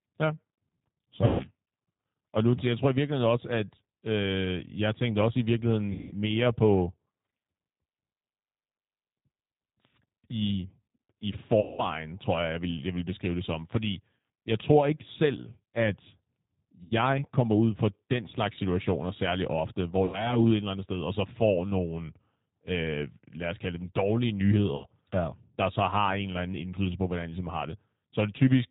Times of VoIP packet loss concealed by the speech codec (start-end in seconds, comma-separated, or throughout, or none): 1.25-1.47, 5.92-6.13, 11.61-11.85, 16.84-16.93, 20.05-20.40, 24.76-24.86